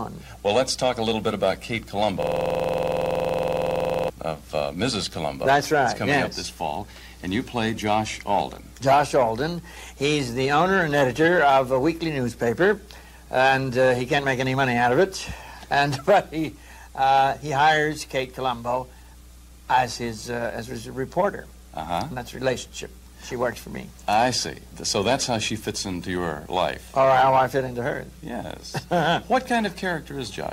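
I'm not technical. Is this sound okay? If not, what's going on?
No. System hang loop, 2.23 to 4.10 s: the computer froze, so the sound hardware replayed one 46 ms snippet 40 times, making a rapid buzzing stutter.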